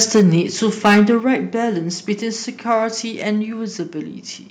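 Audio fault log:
0.01–0.39 s, 0.84–1.11 s and 2.71–2.74 s, microphone overload: the loudest syllables take on a harsh, crackling edge. It is worst at 0.84–1.11 s, where peaks run about 8 dB past the limit and about 7% of samples flatten, against about 4 dB at the start and about 1 dB at 2.71 s. The likely cause is input volume set too high, so the converter cuts off the peak tops. The waveform shows flat-topped plateaus at the peaks. The spectrogram shows bright broadband smearing above the speech harmonics at those moments.
0.2 s and 1.2 s, microphone volume stepped down: speech and background noise drop together in one abrupt step, by about 2 dB and then about 5 dB. This is likely the call software seeing clipping and lowering the device's input volume. The waveform envelope shrinks suddenly rather than fading. On the spectrogram everything turns uniformly darker from that instant, including the noise floor.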